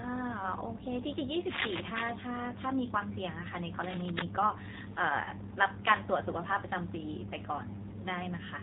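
Throughout, the speech sounds buzzy and synthetic, with nothing above 4 kHz. This is the AMR narrowband mobile codec, which at 7.4 kbps rebuilds the voice from a coarse vocal-tract model. From 5.24 to 5.32 s there is a brief dip or warble, which fits a single lost AMR speech frame of 20 ms. The decoder bridged that gap by repeating its last good settings at reduced gain.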